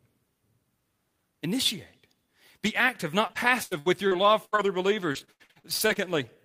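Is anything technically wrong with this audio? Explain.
Yes. From 3.27 to 6.17 s there is repeated packet loss, with gaps up to 84 ms patched by stretching the preceding sound. This makes the speech choppy and robotic.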